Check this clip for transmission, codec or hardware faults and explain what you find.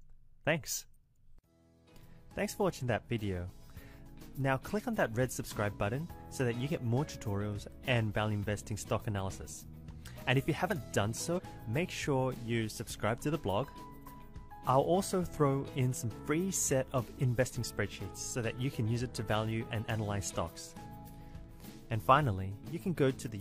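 One fault. From 11.34 to 11.40 s, damaged data in the compressed stream. Corrupted bytes make the decoder lose frame sync, producing a brief chirp or blip.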